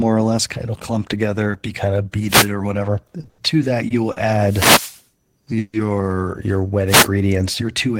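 Speech with three kinds of fault. Wireless microphone noise hits at 2.26–2.50 s, 4.39–5.03 s and 6.86–7.08 s are bursts of swishing static as the FM radio link fades and receiver noise rises over the sound. Unlike the network faults, they add hiss rather than holding a sound still. Short stalls from late packets at 3.21, 3.25, 3.29–3.40, 3.88 and 4.12–4.18 s stretch the last sound for 20 to 90 ms while the jitter buffer waits, then resume with nothing lost. A longer gap at 5.58–5.87 s, likely a call audio freeze, carries the sound on as a fading buzz for about 150 ms with no silence. It is told apart from the stalls by that decaying tail and its greater length.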